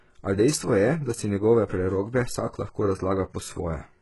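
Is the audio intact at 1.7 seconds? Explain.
No. At 1.7 s, as across the whole speech clip, s sounds come out gritty and metallic, and nothing reaches above 11.5 kHz. This is likely heavy HE-AAC compression, fitting a bitrate around 12 kbps, where the treble is rebuilt from copied lower bands that don't match the original harmonics.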